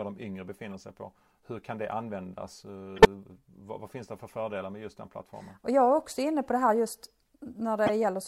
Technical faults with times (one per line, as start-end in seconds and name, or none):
0.72-0.74 corrupt frame decoded
2.96-3.06 corrupt frame decoded
7.86-7.90 corrupt frame decoded